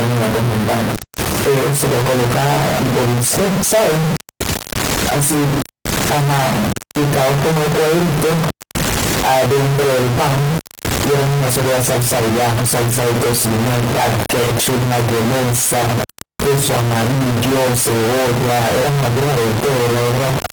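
Throughout the speech, a distortion rides on the signal, and the pauses fill with a steady noise floor instead of falling silent. This pattern points to a stuck bit, likely one converter or data line held fixed, offsetting about half the samples. The Opus voice compression beneath it keeps fullband content up to about 20 kHz.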